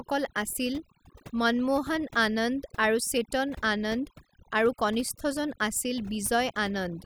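Overdone noise removal runs through the whole recording. The noise reduction was set too hard, cutting individual frequency bands whenever they sat near its noise estimate, so quieter parts of the voice vanish too, leaving speech over near-silence dotted with twinkling specks.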